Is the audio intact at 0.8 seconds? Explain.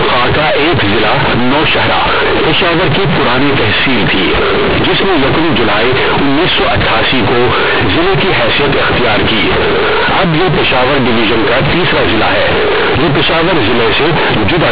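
No. At 0.8 seconds, as through the whole clip, the speech has companded audio read as linear: A-law telephone bytes are played as plain 8-bit samples without expansion. Every sign change swings the output over about half its range, so quiet and loud parts come out equally huge. You get a very loud, buzzy, mangled sound, with heavy noise filling the pauses, all sitting inside the usual telephone band that stops at 4 kHz.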